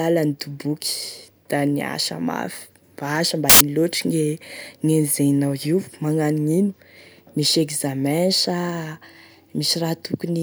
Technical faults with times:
3.50-3.61 samples built from the wrong bytes

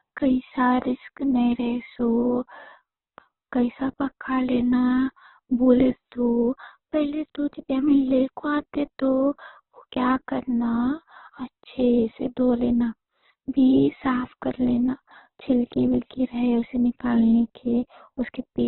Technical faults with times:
0.00-18.68 Opus compression

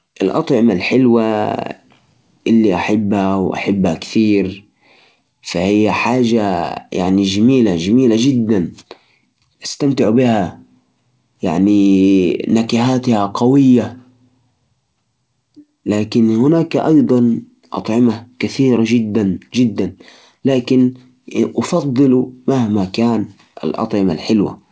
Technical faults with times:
none

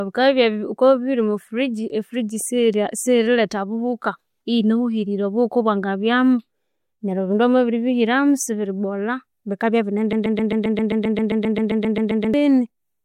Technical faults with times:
10.13-12.34 broken-record loop

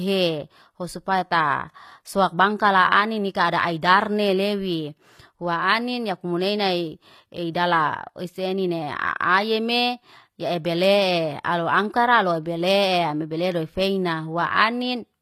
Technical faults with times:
0.00-15.22 HE-AAC compression

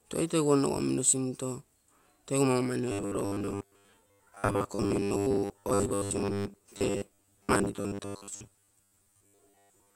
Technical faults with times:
2.92-9.95 robotic sound from repeated short buffers

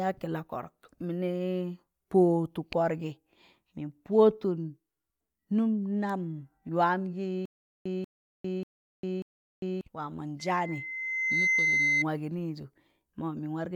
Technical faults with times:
7.45-9.81 stutter with silent gaps
10.39-12.05 loudspeaker feedback squeal

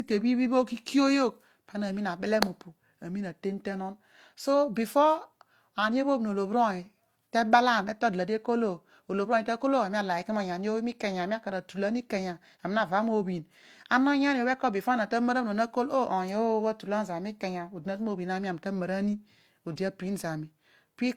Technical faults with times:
0.00-21.16 transcoding between lossy codecs

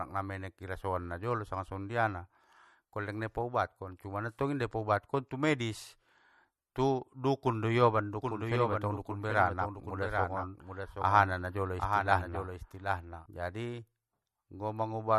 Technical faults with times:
0.00-15.19 MP3 compression
8.22-13.26 doubled audio track

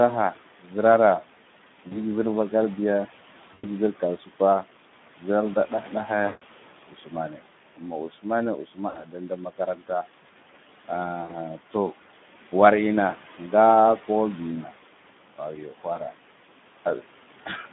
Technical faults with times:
0.00-17.72 noise suppressor artifacts
0.00-17.72 Speex codec
1.87-2.00 VoIP packet loss concealed by the speech codec
3.53-3.69 VoIP packet loss concealed by the speech codec
6.25-6.43 VoIP packet loss concealed by the speech codec
6.89-7.40 speech cut by the noise suppressor
7.77-8.26 speech cut by the noise suppressor
8.64-9.83 speech cut by the noise suppressor
8.89-9.01 VoIP packet loss concealed by the speech codec
11.23-11.34 VoIP packet loss concealed by the speech codec
15.36-16.14 speech cut by the noise suppressor
15.93-15.98 VoIP packet loss concealed by the speech codec

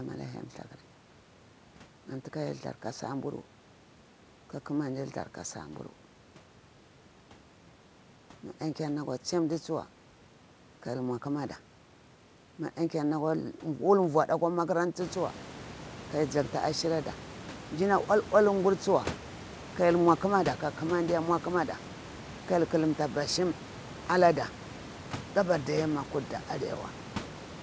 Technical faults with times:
none

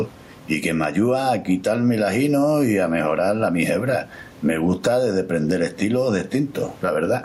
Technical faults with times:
0.00-7.24 gain pumping

